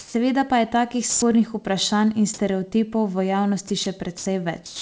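Speech carried over a call link, where nothing above 8 kHz comes through, consistent with G.722 at 64 kbps. It shows sound dropped by the voice detector five times: 0.00–0.14 s, just before "pa je takih", then 3.68–3.70 s, 3.84–3.86 s, 4.18–4.26 s and 4.66–4.82 s. In each, actual speech, up to 140 ms of it, gives way to steady hiss, likely because the sender's detector misjudged soft speech as background. Comfort noise in place of the background appears at 1.10–1.22 s, after "pa je takih". Here no speech is lost. Only the pause's real background, about 24 dB below the loud parts, is swapped for featureless synthetic noise with a level step of about 8 dB. The difference from the dropouts is that comfort noise replaces background, not speech.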